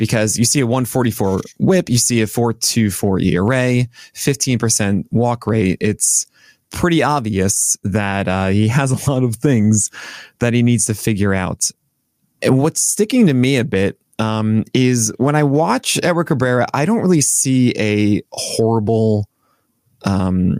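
Gain pumping runs through the whole speech clip: the gain ducks under each loud syllable, swinging around 15 dB, likely from input gain set too high with a fast limiter clamping it. The waveform looks flattened.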